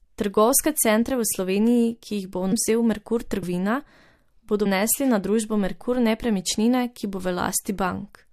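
Compressed frames skipped at 2.51, 3.42 and 4.65 s: whole chunks of the encoded speech never reach playback, so it jumps ahead by roughly 300, 100 and 200 ms, multiples of the 23.2 ms frame. Overlapping neighbouring frames turn each join into a short smeared blip.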